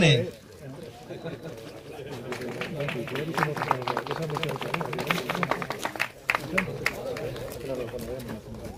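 A doubled audio track runs from 1.16 s to 5.84 s: a full-band copy trails about a fifth of a second behind, a few decibels quieter, with no decay, and it appears and vanishes abruptly. The waveform shows shifted repeated envelopes, and the spectrogram shows every event echoed once. The likely cause is a second, slower capture path.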